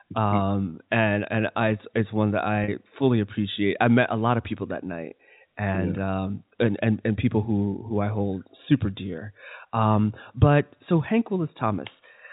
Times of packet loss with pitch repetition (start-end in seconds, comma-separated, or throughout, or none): 2.64-2.68